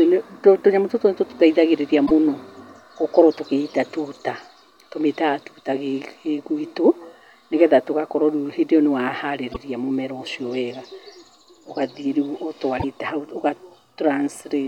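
At 2.03, 9.50 and 12.76 s the speech breaks up briefly for about 70 to 80 ms each: damaged data in the compressed stream. Bad bytes there made the decoder misread frames and lose sync until it found the next valid frame header.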